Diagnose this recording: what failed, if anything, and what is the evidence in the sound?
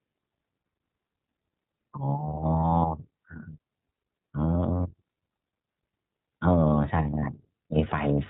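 The whole thing has passed through the iLBC codec, so the problem sits at the codec stage. Everything above 4 kHz is gone, which gives that boxed-in narrowband sound, and the speech has a clearly rough, slightly synthetic edge. iLBC codes each frame's excitation on its own, and the texture here fits its 30 ms frame mode at around 13.3 kbps. The coding damage is plainly audible from start to finish.

On top of that, there are lost iLBC frames, which points to the network stage. You get three short blips, at 2.79 to 2.82 s, 4.77 to 4.80 s and 7.20 to 7.25 s, each about 30 ms long. In each one, the decoder covers the hole by repeating the last pitch cycle mixed with some noise, so it comes across as a brief held, buzzy vowel. Since each frame decodes independently, the voice snaps back right after.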